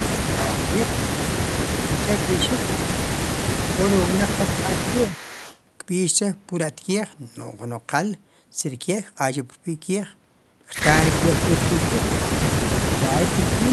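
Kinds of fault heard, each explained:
Speech suppressed in double talk: the voice dips or cuts out in bursts, up to about 40 dB near the end, likely from echo-canceller ducking during overlap.
Echo leak: a faint copy of the voice, about 15 dB down, returns 344 ms late around 5.1 to 5.6 s, likely residual loudspeaker echo.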